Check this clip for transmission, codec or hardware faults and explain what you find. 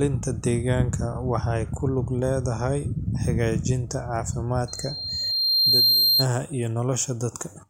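There is one hardware fault, a loudspeaker feedback squeal from 4.68 to 6.26 s. A microphone is re-amplifying its own loudspeaker with loop gain above one at 4.2 kHz, so that tone feeds itself, swelling over about a second and a half into a piercing whistle roughly 5 dB above the speech.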